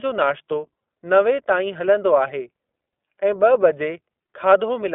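Throughout the clip, the speech has passed through the iLBC codec. It codes each 20 ms frame's excitation on its own, which fits its 15.2 kbps mode. The line carries only about 250 Hz to 3.5 kHz, so the speech loses its low body and its upper sibilance and air. The codec damage is plainly audible: consonants and vowels take on a rough, slightly synthetic, buzzy texture.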